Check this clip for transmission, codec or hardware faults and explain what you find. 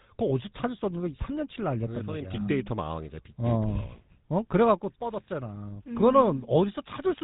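Yes, there's one fault, and it runs through the whole speech clip: GSM full-rate codec coding. It models the vocal tract and drives it with sparse, regularly spaced pulses, which fits its 13 kbps rate. So the voice gets a buzzy, gravelly roughness, and nothing comes through above 3.8 kHz.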